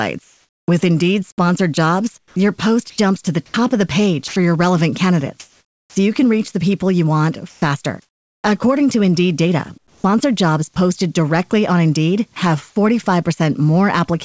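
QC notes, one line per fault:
0.24–0.68 s, 5.40–5.96 s, 7.50–8.44 s, 9.78–10.04 s, comfort noise in place of the background: the real background gives way to steady, featureless synthetic noise, about 2–7 dB quieter in the first, second and last pauses, likely from discontinuous transmission during pauses.
2.18–4.36 s, sound chopped by the voice detector: sending likely switches off and on repeatedly, so quiet parts drop to comfort noise.
5.85–5.96 s, onset clipped by the voice detector: the first 110 ms are filled with comfort noise, likely a slow detector, so the returning sound starts abruptly without its soft beginning.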